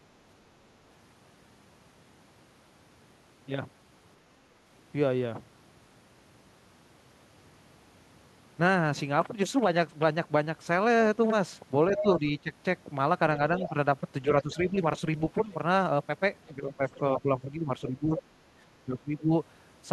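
At 11.95 to 12.1 s a second voice surfaces under the speech, only about 5 dB quieter, and from 12.02 to 12.52 s the main talker dips by around 10 dB for a total of roughly 200 ms. The same pairing returns at 13.6 to 14.56 s, with the other side's voice leaking through about 10 dB down, while the talker is pulled down by about 10 dB in patches totalling around 300 ms between 13.69 and 14.77 s. At 16.48 to 17.21 s the leak is faint, about 25 dB below the speech, yet from 16.58 to 19.31 s the talker is dipped in pieces adding up to about a second.

The leaking voice is likely far-end loudspeaker sound that the echo canceller failed to remove from the microphone. It adds a second voice rather than taking anything away. The dips are likely speech suppressed in double talk: with both sides talking, the canceller turned everything down. What tells this apart from the leak is that the wanted voice itself loses level in chunks when the other side is speaking.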